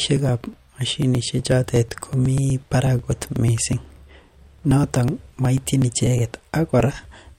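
Periodic USB or driver dropouts run from 0.17 s to 7.29 s, repeating every 0.123 s, about eight times a second. Each time, something blocks the USB bus or audio driver, and roughly 2 ms of the speech is skipped outright rather than filled, so the waveform jumps across the gap. Around fifty of these evenly spaced losses produce a steady train of small ticks that are audible only while speech is present.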